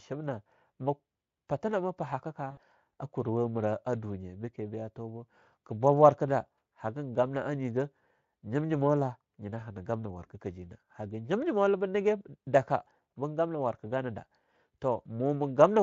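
VoIP packet loss concealed by the speech codec occurs from 2.51 to 2.60 s, just after "mah patinama pahakk ka" and before "a kuruwa mira ah". About 60 ms of the stream went missing, which fits three lost 20 ms frames. The Speex decoder bridged the gap by repeating its last pitch and spectral shape at a falling level. The speech smears into a brief buzzy tone or coloured noise that fades, and the onset of "a kuruwa mira ah" sounds thin and rough while the decoder's state rebuilds.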